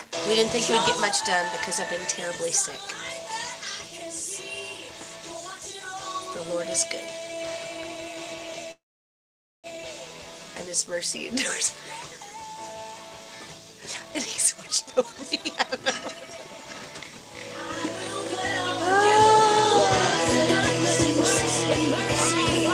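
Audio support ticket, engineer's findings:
Call audio freeze, 8.71–9.67 s. Sound stalls, short fading tail, then 0.86 s silence. Resumes where it stopped, nothing lost, delay grows 0.92 s. Likely jitter buffer underrun from delayed packets.

Jitter buffer speed-up, 13.81–16.94 s. Audio runs at 129% speed, pitch unchanged, sounds hurried. Receiver trimming repeated pitch-period slices, around a second in total, to shed built-up delay.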